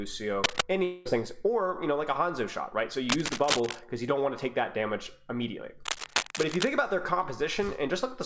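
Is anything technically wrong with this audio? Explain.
Yes, there are two problems. There's cable scratch noise at 0.44 to 0.61 s, 3.09 to 3.79 s and 5.82 to 6.68 s: rough, rustling bursts, likely from a worn cable or connector being moved, sitting roughly level with the sound or a bit above it. Then a long network dropout at 0.84 to 1.07 s, where about 0.22 s of audio likely never arrived; the receiver papered over it with a fading buzz or hiss instead of silence.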